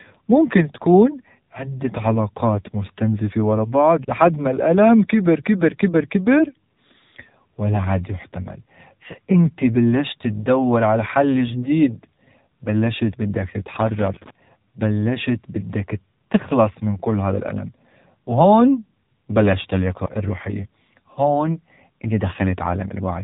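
Throughout, the audio has passed through an AMR narrowband mobile codec that samples at 8 kHz and rebuilds speech from a vocal-tract model and sparse pulses. The sound points to a low rate near 7.4 kbps: nothing above 3.8 kHz survives, and the voice is plainly buzzy and synthetic.

From 13.80 to 14.30 s, a loose connector crackle appears as a worn contact makes and breaks rapidly, chopping the signal on and off. The result is an irregular half-second burst of scratchy crackle cutting across the speech.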